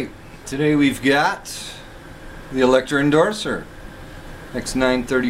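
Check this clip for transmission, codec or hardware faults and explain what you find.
No faults can be heard anywhere in the clip, and the signal stays steady and intact throughout.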